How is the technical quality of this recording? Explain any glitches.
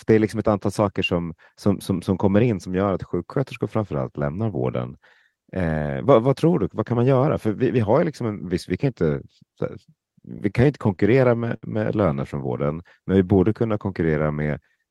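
The speech has audible timing faults: three short stalls a little after 10 seconds and a stretch of slowed delivery near the end.

The short stalls from a late packet come at 10.50 to 10.54 s, just before "kan inte", at 10.96 to 11.00 s, just after "kan inte", and at 11.56 to 11.65 s, just before "med löner från". Each one holds a sound a fraction too long, with a faint buzz or dip, for 21, 26 and 63 ms. A packet arrived late, the jitter buffer ran dry, and the receiver stretched the last sound until the packet arrived. It then resumed from the same point, so nothing is lost.

The jitter buffer slow-down runs from 13.11 to 14.86 s. The speech drags to about 95% of its normal pace while the pitch stays unchanged, so sounds are drawn out. The receiver was rebuilding its reserve by repeating single pitch periods and bits of pauses many times over, adding 91 ms across the stretch.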